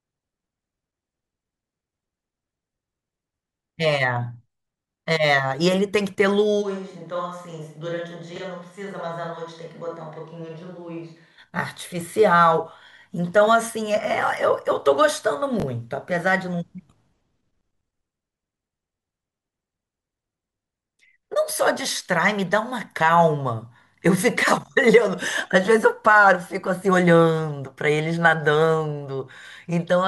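The clip is speech. From 6.63 s to 11.37 s it turns suddenly hollow and roomy, with thinner bass, a level about 10 dB lower and background noise roughly 35 dB below the speech. This is likely a switch to a distant microphone, and the return at 11.37 s is just as abrupt. Chunks out of order cause two brief jumbled moments, at 8.36 to 8.40 s and at 15.60 to 15.64 s. In each, a 20 ms chunk plays one chunk late, so its neighbour comes first. Nothing is missing, but the swapped order leaves three hard joins each time.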